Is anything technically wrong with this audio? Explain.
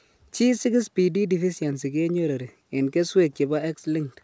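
No, nothing is wrong with this speech: it carries the ordinary signature of a wideband call path, with content stopping at 8 kHz as expected from a G.722 link at what sounds like 64 kbps.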